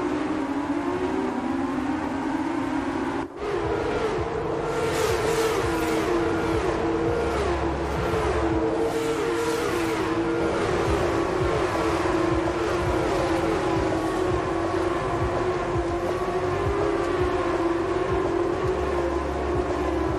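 Nothing is technically wrong with the audio; there are no faults to time or trace to a cause.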